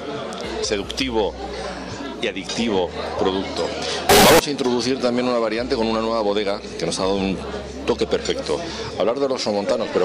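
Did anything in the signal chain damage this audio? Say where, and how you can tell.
Yes, at sample-format conversion: from 4.09 to 4.39 s it turns blaring, squared-off and harsh, with noise as loud as everything. That's likely float read as integer.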